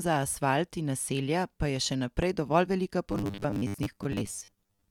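A likely voltage pulse, such as static or a switch glitch, adds a single loud pop at 2.22 to 2.25 s, between "naselja pa je še" and "dovolj velika", peaking a few decibels above the speech. From 3.12 s to 4.90 s, just after "dovolj velika", audio likely arrives too seldom and the last 10 ms keep repeating, covering about half the stretch. This produces robotic sound from repeated short buffers, a rigid metallic 100 Hz buzz that only loosely follows the speech.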